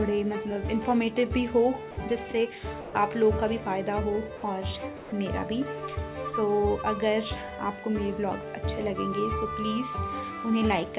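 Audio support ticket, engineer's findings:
Sound dropped by the voice detector: brief gaps at 1.91–1.97, 2.81–2.93, 4.37–4.43, 4.97–5.12 s (60–150 ms). Content replaced by steady low-level comfort noise, likely sender VAD misclassifying. Spectrogram shows flat noise patches; the cutoff at 4 kHz throughout fits G.711 A-law.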